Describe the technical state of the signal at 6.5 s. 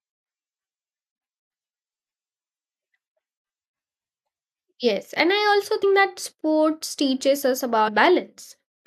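At 6.5 s the speech signal is intact, with no technical fault audible at that moment.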